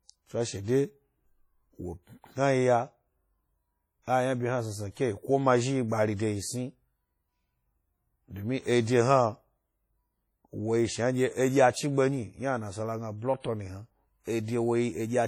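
Across the whole speech clip there is a washy, ringing quality with hiss that swells and fades with the signal, likely from WMA compression whose heavy damage fits a bitrate around 32 kbps. Unlike broadband noise, the hiss tracks the sound rather than sitting steady underneath.

Pre-echo appears at 0.63 to 0.68 s (48 ms), at 13.40 to 13.44 s just after "a nasala gna blood" (40 ms), and at 14.24 to 14.27 s (37 ms). Quantisation noise sized for a sharp attack smears into the quiet stretch before it, so a brief hiss leads each onset and the attack itself sounds soft. Unlike a click or a reverb tail, this noise comes before the attack, not after.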